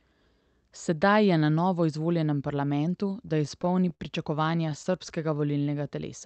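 Repeated stalls (stutter) begin at 3.27 s, right after "na novo izvoljenem parlamentu", and run to 4.02 s. Packets reached the receiver late, so its jitter buffer kept running dry. Eight times the receiver stretched the last sound to bridge the wait, adding 118 ms in total, about 16% of that stretch. The longest gap was 53 ms. A second run of stalls from 4.44 to 5.12 s has seven shorter gaps, the longest 13 ms, filling 62 ms or about 9%. Nothing is lost, but the speech hitches and drags in both passages.

A jitter buffer slow-down follows from 5.31 to 5.85 s. With its reserve depleted, the receiver rebuilt it by repeating single pitch periods and slivers of pause many times over. This inserted 83 ms and brought the speech to about 86% of normal speed. Syllables sound drawn out while the pitch stays unchanged. Through all of this the Opus call path keeps its band-limiting, with the highs stopping around 8 kHz.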